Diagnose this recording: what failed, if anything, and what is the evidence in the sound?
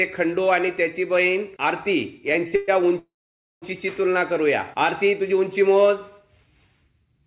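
At 2.48 to 2.54 s the sound is briefly held, stretched by 36 ms, and then carries on with nothing lost. This is a short stall from a late packet. One packet missed its slot, the jitter buffer emptied, and the receiver extended the last sound until the packet arrived.

Two longer holds follow. From 2.56 to 2.70 s the sound drags on as a continuation for 120 ms. From 2.99 to 3.64 s a similar fill decays into about 540 ms of silence, 630 ms in total. Each time the audio resumes exactly where it stopped, just later. These are call audio freezes, likely caused by packets held up in the network and a jitter buffer that ran dry. Throughout, the band stops at 4 kHz, which fits a 64 kbps G.711 mu-law call path.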